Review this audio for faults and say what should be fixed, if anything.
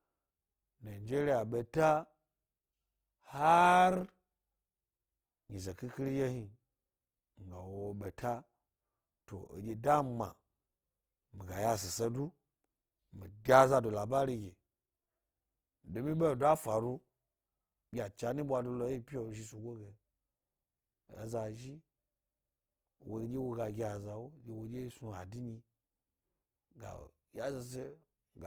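Throughout the speech, the sound is grainy and rough, with a noisy texture on sustained tones. Likely cause: Opus compression in its CELT music mode at a low rate, which fits about 24 kbps. Fullband bandwidth is retained, but short bits force band filling with folded or noise content. To prevent it, encode at a higher bitrate or keep an uncompressed master.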